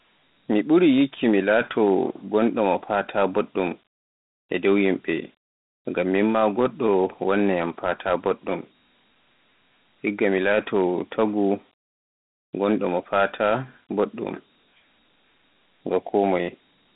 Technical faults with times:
0.00-16.95 Dialogic VOX ADPCM

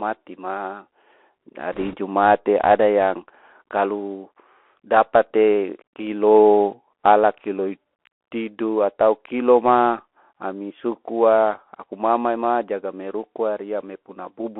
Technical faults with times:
0.00-14.59 Bluetooth CVSD headset codec
1.73-1.96 bit errors on a Bluetooth voice link

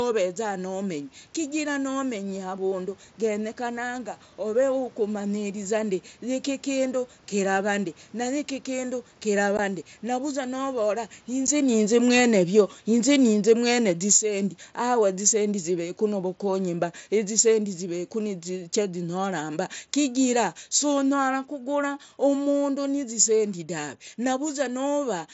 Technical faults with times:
7.33-25.04 automatic gain falling
9.57 unconcealed Bluetooth headset packet loss
11.47 unconcealed Bluetooth headset packet loss
14.20-14.61 automatic gain rising

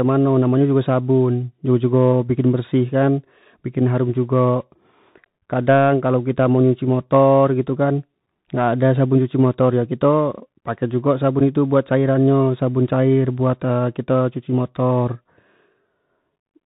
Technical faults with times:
0.00-16.67 Bluetooth CVSD headset codec
11.40 unconcealed Bluetooth headset packet loss

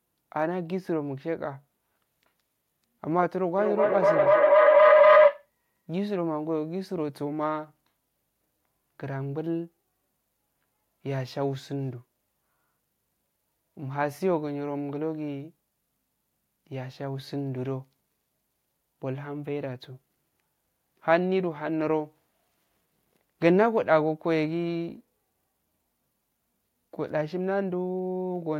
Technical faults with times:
3.57-5.50 feedback howl

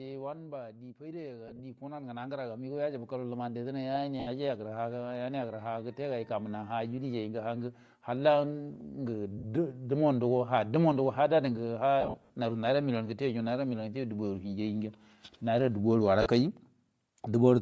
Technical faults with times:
0.00-17.62 Bluetooth LC3 compression
0.05-1.03 automatic gain falling
0.97-3.39 automatic gain rising
1.48-1.61 lost LE Audio frames
4.20-4.28 lost LE Audio frames
9.38-9.45 lost LE Audio frames
12.01-12.33 lost LE Audio frames
16.22-16.26 lost LE Audio frames

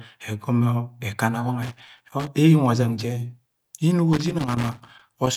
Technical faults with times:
1.62-2.27 loose connector crackle
4.13-5.36 loose connector crackle

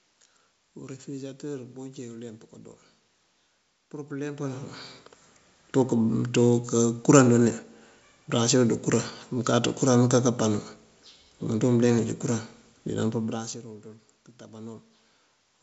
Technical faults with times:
none

